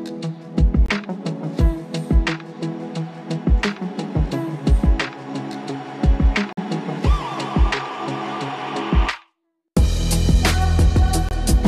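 At 0.86 s the sound cuts to silence for about 38 ms, then returns. This is a corrupt frame muted. Damaged bits made the decoder reject part of the compressed stream, and the player filled the gap with silence. The same hole appears at 6.53 s for about 60 ms and at 11.29 s for about 40 ms. Each gap fits roughly two frame lengths. Each starts abruptly, and the timing around it stays intact.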